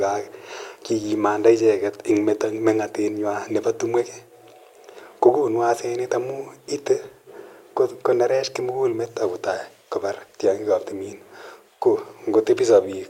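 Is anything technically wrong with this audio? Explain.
No, nothing technically wrong turns up in this recording; the speech comes across without any glitches or problems to point out.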